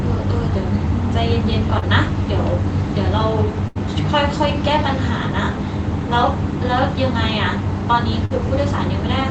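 At 1.79 to 1.84 s there is a short concealed packet loss. About 20 ms of the call never arrived in time, and the decoder bridged it by extending the preceding sound for roughly 23 ms before blending back. The result is a quick smear or wobble rather than an audible gap.

Bursts of packet loss follow at 3.68 to 3.77 s and 8.25 to 8.32 s, with about 80 ms and 40 ms missing. These are longer than the single dropout. The last sound is stretched into a held buzz or fading hiss, and then the audio jumps ahead with material skipped. The Opus call path band-limits the sound to about 8 kHz throughout.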